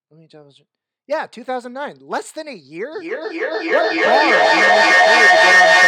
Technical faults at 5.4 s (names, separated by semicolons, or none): feedback howl